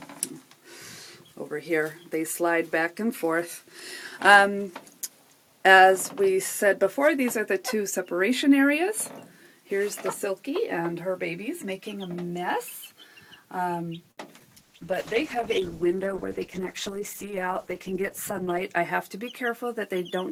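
At 14.11 s a packet arrives late and the jitter buffer runs dry, producing a short stall from a late packet. Rather than skip ahead, the receiver holds the last sound steady for about 61 ms until the packet turns up, then resumes exactly where it left off. Nothing is lost, and the delay grows by that same 61 ms. What you hear between 14.11 and 14.19 s is one sound drawn out too long, with a faint buzzy, slightly sagging quality.

Shortly after, between 14.40 and 14.42 s, 20 ms of audio never reaches the decoder. This short concealed packet loss is patched with only about 5 ms of synthesised continuation before the stream rejoins the real signal, so the overall delay shrinks a little. The repair is too brief to hide everything, leaving a tiny smear where a sliver of the sound simply drops out.

From 14.59 s the call's bandwidth estimate collapses and the encoder is pushed from 128 kbps down to 11 kbps, a call bitrate drop that stays at its floor for about 4.1 s. 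At so few bits the codec quantises coarsely and discards the upper frequencies, so the audio turns muffled, grainy and watery. That dulled, rough character persists until the rate recovers at 18.71 s.

Inside that degraded stretch, from 16.25 to 16.75 s, the jitter buffer is holding more audio than its target and trims the excess, a jitter buffer speed-up. It removes repeated slivers of a pitch period or so, about a twentieth of a second in total, which makes that half-second play at roughly 108% speed. Pitch is unchanged, but the sound feels briefly hurried and pressed forward.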